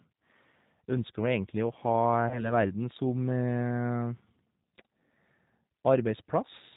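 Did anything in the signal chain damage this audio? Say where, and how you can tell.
Yes, at the codec stage. Across the whole clip the speech has been squeezed through the G.729 codec, and the damage is plainly audible. Nothing is left above 4 kHz, so the speech is dull, and the voice has a rough, slightly synthetic grain. That grain comes from rebuilding each 10 ms frame from a vocal tract filter, a pitch predictor and a few pulses rather than the real waveform. The sound fits the 8 kbit/s G.729A variant.

There is also VoIP packet loss concealed by the speech codec, from 2.29 to 2.44 s, a network fault. The gap itself is 20 ms, which fits a single lost packet. With no data, the decoder kept extending its last pitch and filter while lowering the gain, so the speech is stretched into a buzzy tone or coloured noise that fades. Because each frame is predicted from the one before, the voice stays weakened and distorted for about 0.16 s in total, well after the gap ends.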